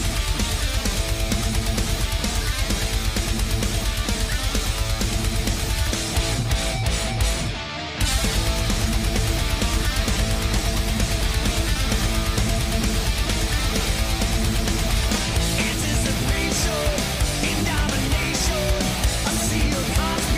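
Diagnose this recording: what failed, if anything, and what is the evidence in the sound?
Nothing failed: no stage in the chain, from wiring and conversion through buffering, processing, transport, storage and playback, leaves audible evidence of a fault.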